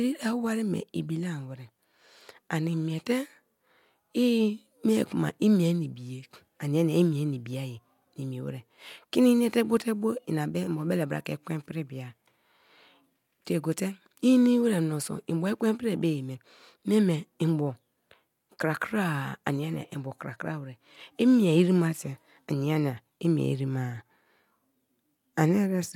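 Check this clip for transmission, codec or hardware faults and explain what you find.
Nothing faulty turns up anywhere in this speech recording.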